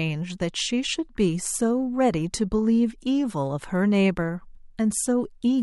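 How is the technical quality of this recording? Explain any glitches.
The technical quality of the recording is good, and there are no glitches to explain.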